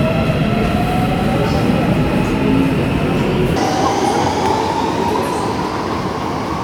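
From 3.56 s to the end, a section at the wrong speed plays at 2.0 times its proper rate, likely from a clock mismatch, so everything rises about ten semitones and hurries. On a spectrogram, energy jumps upward and features compress horizontally.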